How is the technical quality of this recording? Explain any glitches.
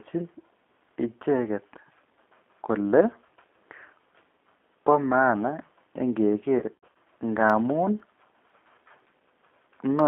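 The recording has clearly degraded technical quality, with three separate faults.

The whole clip has passed through the G.729 codec, which fits a G.729A phone path at 8 kbit/s. The codec discards the original waveform and rebuilds the speech from a vocal tract filter, a pitch predictor and a few pulses per frame. The line passes only about 250 Hz to 3.5 kHz, so the speech sounds thin and muffled. The codec damage is plainly audible as a rough, slightly synthetic edge on every syllable.

From 6.59 to 6.88 s there is VoIP packet loss concealed by the speech codec. Packets went missing, adding up to 180 ms of lost audio scattered over about 360 ms, with the longest gap 90 ms. For each gap, the decoder extended its last pitch and filter settings and turned the gain down frame by frame. The speech smears into a buzzy tone or coloured noise that fades there, and it stays weak and distorted briefly after the stream recovers.

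From 7.50 to 9.99 s there are periodic USB or driver dropouts every 0.5 s, about seven in total. At that fixed interval something stalls the audio bus or driver, and a fraction of a millisecond of signal is replaced by silence. Each gap is far too short to hear as a pause. Instead it shows up as a small, evenly spaced tick or click, and it is audible only where speech is present.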